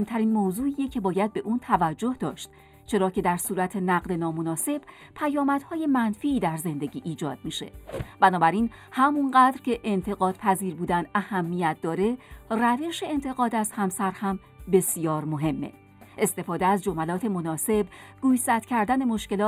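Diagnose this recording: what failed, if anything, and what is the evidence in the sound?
A channel delay causing comb filtering runs through the whole recording. One channel lands a few samples late, about a tenth of a millisecond, pointing to a driver or buffer misalignment. The mono sum cancels near 5 kHz and its odd multiples, giving a hollow, phasey sound. Unlike codec artefacts, these notches never move.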